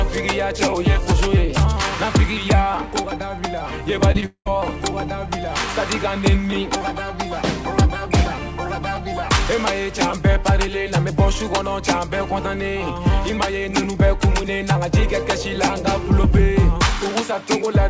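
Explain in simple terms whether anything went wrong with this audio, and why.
From 4.12 to 4.53 s you get repeated packet loss (robotic sound). Missing chunks were patched by stretching the previous sound, making it choppy.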